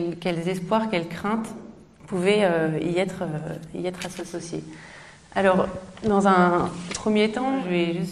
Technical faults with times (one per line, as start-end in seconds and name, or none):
4.00-7.81 digital radio blending to analogue